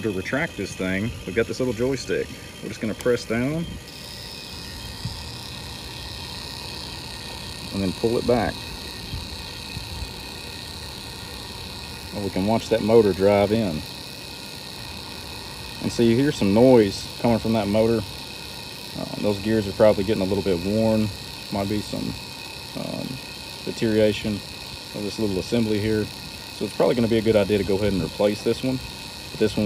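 No technical fault can be heard anywhere in the audio. Nothing in it needs a technical explanation.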